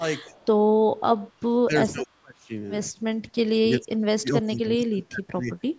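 Speech suppressed in double talk first appears at 0.00 to 0.04 s, a dip of about 10 dB, then again at 0.25 to 0.33 s, a shallower dip of about 5 dB. The level drops briefly and recovers. This is likely an echo canceller that could not tell the near talker from loudspeaker echo while both sides spoke, so it turned everything down. On a waveform these show as short pinches in the envelope.

From 0.36 to 0.46 s comes an echo leak: a very faint delayed copy of the voice, roughly 0.4 s behind and about 35 dB below the speech. It likely comes from a loudspeaker on one side of the call whose echo canceller let some of its microphone pickup through. On a spectrogram it would appear as a ghostly, weak repeat of earlier harmonic patterns, shifted right by 0.4 s.

Suppression returns more heavily from 1.61 to 2.52 s, dropping by up to about 30 dB over roughly 0.7 s. There is a brief dip of about 25 dB at 3.11 to 3.19 s. 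The longest stretch runs from 3.59 to 5.51 s, up to about 30 dB down for around 2 s. In these stretches the voice dips. The waveform shows deep, ragged troughs. On a spectrogram the energy fades in patches, below the normal 8 kHz ceiling of the call's microphone processing.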